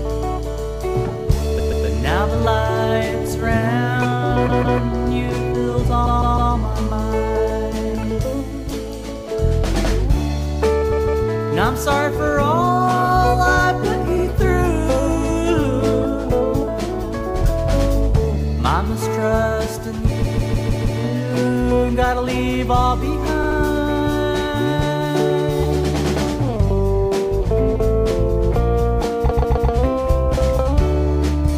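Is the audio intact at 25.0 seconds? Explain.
Yes, the audio is intact at 25.0 seconds, with no fault audible at that moment.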